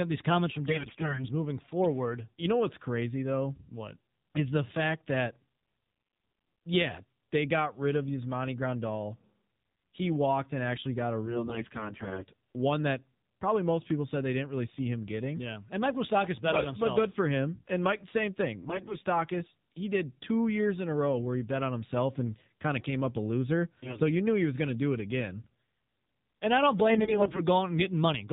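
Throughout, the speech runs through the AMR narrowband mobile codec at a low rate, which fits 7.4 kbps. Nothing above 4 kHz survives, and the voice sounds plainly buzzy and synthetic. AMR bit errors follow: flipped, weakly protected frame bits misplace the excitation pulses and skew the pitch, gain and spectrum values. The speech keeps its pitch and level but turns hoarse, scratchy and gargly. This happens most heavily from 0.66 to 1.27 s, between "at these comments from" and "moving forward". It recurs from 11.26 to 12.25 s and from 16.54 to 16.65 s after "bet but". It comes back from 18.54 to 18.97 s, from 23.83 to 24.00 s between "came up a loser" and "you knew he was", and from 26.90 to 27.41 s.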